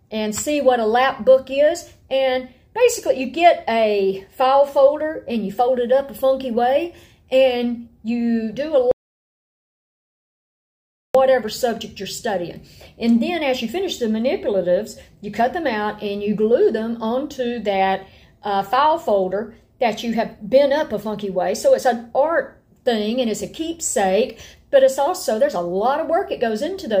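From 8.91 s to 11.15 s the sound cuts out abruptly mid-flow and returns just as suddenly: an audio dropout to silence lasting about 2.23 s. The gap is silent, with no room tone or hiss underneath. That points to the input likely being lost while the recorder kept writing silence. On a waveform this appears as a flat line; a spectrogram shows a solid black band across all frequencies with sharp vertical edges.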